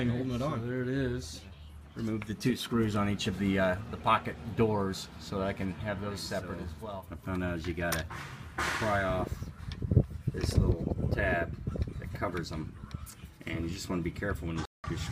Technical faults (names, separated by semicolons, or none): corrupt frame muted